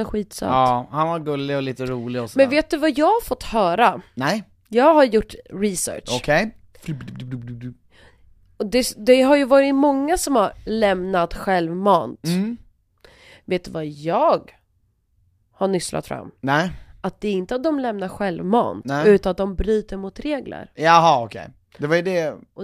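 A recording of speech, and nothing technically wrong turns up in it at any point.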